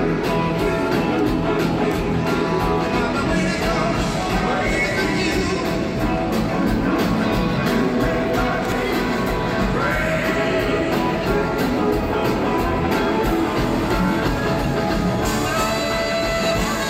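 A brief blip at 8.72 s, lasting only a few milliseconds, is damaged data in a compressed stream: a short run of corrupted bytes there leaves the decoder unable to read those frames correctly, so it loses sync and resumes at the next valid frame header.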